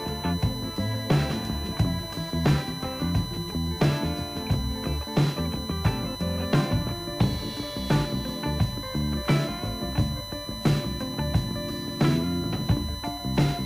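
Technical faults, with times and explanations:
Throughout, USB whine: a steady, fixed-pitch tone sits under the sound, built on 1 kHz with its strongest component up at 4 kHz, and it's fairly loud, roughly 10 dB below the signal. That's the bus drawing current in 1 ms frames and leaking it through power or ground.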